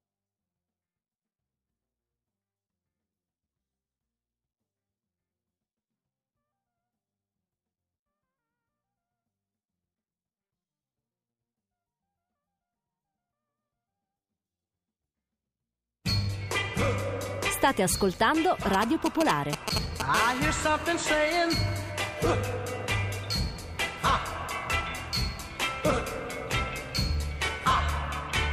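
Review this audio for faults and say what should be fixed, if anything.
A nearby 2G phone exchanging signalling bursts was rectified by the audio circuit, giving GSM signalling bursts from 18.74 to 20.02 s: a galloping dit-dit-dit pattern of short 217 Hz buzzes, roughly as loud as the sound itself.

A nearby phone then entered a call, transmitting continuously at 217 bursts per second, producing GSM phone buzz from 20.14 to 21.92 s: a hard, raspy 217 Hz buzz with many harmonics, about 13 dB below the signal.

Keep mobile phones switched off or well away from the recording chain, and use shielded, properly grounded cabling to stop radio pickup.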